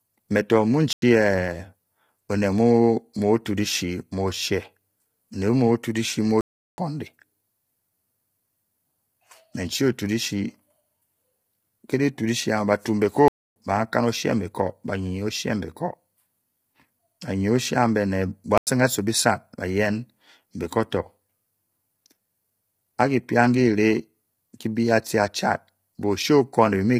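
Right from the start the speech sounds rough and grainy, with noise smeared between the harmonics and a thin, synthetic top end. That's heavy low-delay AAC compression, likely AAC-ELD at 24 kbps, whose short frames can't resolve pitch cleanly at that rate.

Four blocks of digital silence cut in: 0.93 s for 93 ms, 6.41 s for 370 ms, 13.28 s for 280 ms, and 18.58 s for 93 ms. Each cuts out and back with no fade; the other three lengths fit 4096- and 16384-sample buffers, most likely not filled in time.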